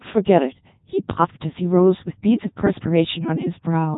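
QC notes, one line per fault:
Throughout – Codec 2 vocoder: the speech sounds robotic and buzzy, heavily damaged, with nothing above about 3.8 kHz. The decoder rebuilds the voice from sine waves using only pitch, voicing, energy and a coarse spectral envelope, so the original waveform is gone and every natural detail is replaced by synthetic tones. The narrow bandwidth and mechanical texture point to the top 3.2 kbit/s mode of this low-rate digital-radio codec.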